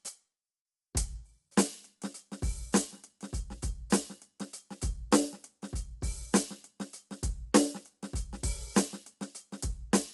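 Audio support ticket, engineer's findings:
Low-delay AAC compression, throughout the clip. Music sounds rough and grainy, with noise filling the gaps between harmonics and tonal detail smeared. Band stops dead near 11.6 kHz, top end dull. Likely AAC-ELD: its short frames resolve harmonic structure poorly and burn bits, so at a low rate the encoder starves the spectrum. Damage level fits a bitrate around 32 kbps.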